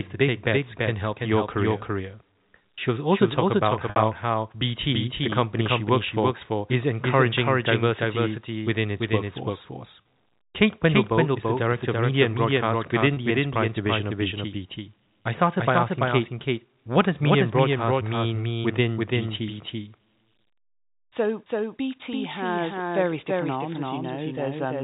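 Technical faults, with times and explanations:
Throughout: doubled audio track. A second full-band copy of the speech trails the original by about a third of a second. It sits roughly 5 dB lower. It has no decay and no room colour, so it sounds like a crisp slapback rather than an echo. The likely cause is the same audio being captured twice, with one path running slower, or an edit leaving two copies out of step.
3.90 to 3.96 s, 10.02 to 10.05 s, 13.14 to 13.17 s: packet loss with pitch repetition. Audio went missing in each gap. The receiver filled it by repeating the last pitch period. The first gap lasts 60 ms, which fits two lost packets, and is long enough for the repeated period to fade toward silence before speech returns with a short cross-fade. The other two last 30 ms each, which fits one packet, and sound like a briefly held, buzzy tone.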